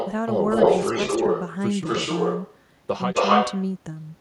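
Echo leak appears at 0.0–0.12, 0.5–1.53, 1.85–2.57 and 3.14–3.65 s. A delayed copy of the speech trails by 236 ms, drifting to 254 ms, and is about as loud as or louder than the original. The likely cause is a far-end echo canceller failing to remove its loudspeaker pickup. A spectrogram shows each harmonic pattern repeated and shifted right.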